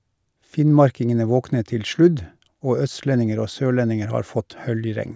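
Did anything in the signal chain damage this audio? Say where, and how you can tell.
No, nothing along the chain audibly damages this speech; no stage leaves a trace that can be pointed to.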